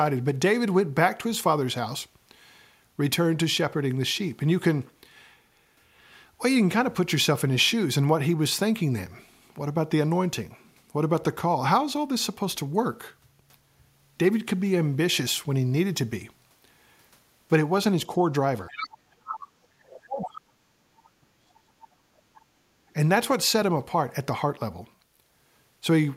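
From 18.7 to 19.65 s the speech sinks sharply, in places by something like 40 dB, and stays buried for most of that span. This is speech suppressed in double talk, likely the echo canceller failing to separate the near talker from loudspeaker echo while both sides spoke and pulling everything down. It returns from 19.81 to 20.6 s, with dips near 35 dB, and again from 20.91 to 22.15 s, where roughly a second of the speech is lost or cut into pieces. Unlike a network dropout, the losses follow the overlap with the far side rather than arriving as clean, evenly timed gaps.

Inside those dips, short scraps of a second voice come through at 18.71 to 18.87 s, 19.26 to 19.35 s and 20.22 to 20.27 s, sitting around 10 dB below the main speech. This is the other side's voice leaking through, likely loudspeaker sound the canceller left in the microphone signal. It is a distinct second talker rather than a delayed copy of the near voice, which sets it apart from room reverberation.

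At 22.43 to 22.84 s the room sound drops by about 11 dB for roughly 0.4 s and then comes back. This is background gated by the echo canceller, which clamped the microphone while the loudspeaker played. Only the ambience dips, so it is a gate on the room sound rather than another loss of speech.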